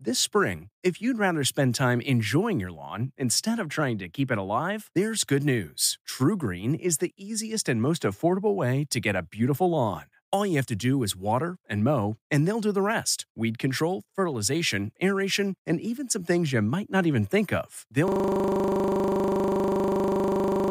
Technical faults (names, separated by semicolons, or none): system hang loop